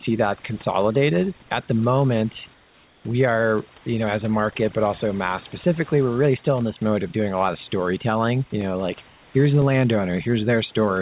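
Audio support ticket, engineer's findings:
Overdone noise removal, whole clip: the gaps between phrases collapse to near silence with twinkly specks. The suppressor is set too hard. It pulls bands down wherever they sit close to its noise estimate, so the quiet parts of the speech get gated out along with the room hiss. That hiss sits about 29 dB under the speech.

Periodic USB or driver dropouts, 0.62 s to 10.62 s: a tick every 1.0 s, ten in all. Each is about 2 ms of audio replaced by silence, audible only while there's sound. The strict one-second spacing points to a background task stalling the USB bus or audio driver on a timer.

Comfort noise in place of the background, 2.54–3.04 s, 3.78–3.86 s and 9.08–9.34 s: during those pauses the real background is swapped for a flat, featureless hiss about 2–3 dB quieter. The true background there sits roughly 31–36 dB below the loud parts. 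The likely cause is discontinuous transmission kicking in when the VAD hears no speech, with the receiver synthesising noise to fill the gap. The codec path is telephone-band, nothing above 4 kHz, which fits G.711.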